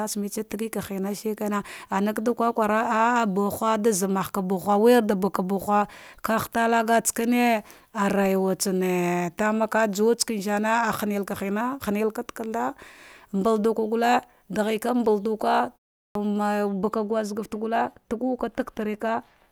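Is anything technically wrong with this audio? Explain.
Yes, there are two faults.

At 16.04 s, after a 0.34 s pause, a clipped start after a pause drops about 0.11 s: the output device dozed during silence and woke late, so speech begins abruptly.

From 16.69 s to the end, de-emphasis is applied wrongly. A treble cut meant to undo pre-emphasis was applied to audio that had none, or was applied twice, leaving 10 kHz about 8 dB below 1 kHz and the speech dull and muffled.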